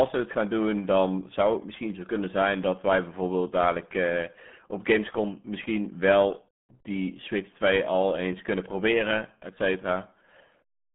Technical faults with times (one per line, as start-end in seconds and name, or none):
0.00-10.94 RealAudio 14.4 codec